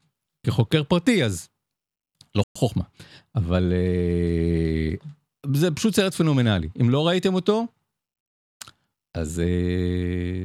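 At about 2.44 s the speech drops to silence for roughly 120 ms, until 2.56 s, most likely a Bluetooth stall where delayed packets let the headphone buffer run dry.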